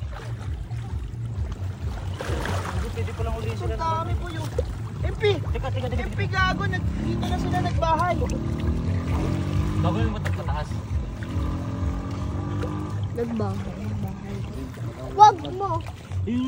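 No technical faults are audible anywhere in the recording.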